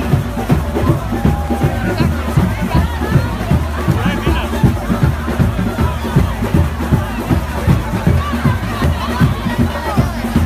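Likely dropped samples: under a millisecond of stream goes missing, so the waveform jumps, giving single sharp clicks at 1.48, 2.99, 3.81, 5.00, 6.30, 7.74 and 8.84 s.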